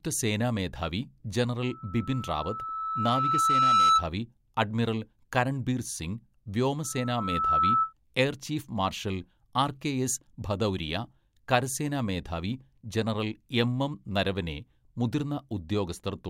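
Loudspeaker feedback squeal runs from 1.62 to 4.07 s and again from 6.84 to 7.93 s. Both times a microphone re-amplifies its own loudspeaker until a 1.3 kHz tone rings out on its own. The first swells over about two seconds to roughly 10 dB above the speech and stops just before "അഡ്മിറൽ കരൺബീർ സിംഗ്". The second rises faster, in under a second, to about 5 dB and stops before "എയർ ചീഫ് മാർഷൽ ആർ".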